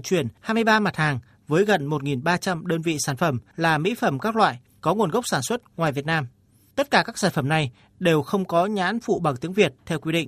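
No technical faults can be heard anywhere in this recording.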